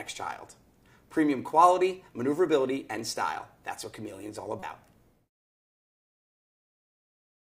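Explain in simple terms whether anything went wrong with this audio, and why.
Something did go wrong, briefly. From 4.60 to 4.63 s there's a short blip: a corrupt frame decoded. A couple of compressed frames got damaged bits, and the decoder played them anyway, so misread data put a quick burst of stray sound in the wrong place.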